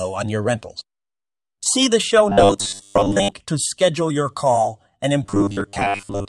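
From 2.29 to 3.32 s, and again from 5.23 s to 6.28 s, the speech goes robotic, the classic sound of repeated short buffers. It's likely that fresh audio was arriving too slowly, so playback kept looping a tiny slice, roughly two thirds or more of the time. The repeat rate stamps a steady 100 Hz buzz on the voice, which points to a 10 ms chunk, giving a rigid metallic drone that still tracks the speech loosely.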